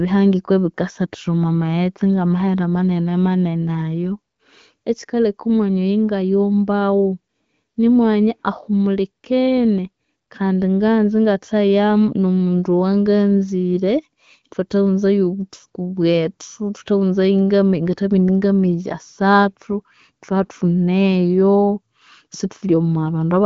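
No technical faults can be heard in this speech.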